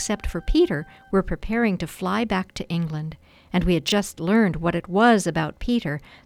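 At 3.88 to 3.92 s the audio has chunks out of order: a 20 ms chunk plays one chunk late, after the one meant to follow it. The result is a brief jumbled stutter, seen as three hard steps in the waveform and thin vertical broadband streaks on a spectrogram.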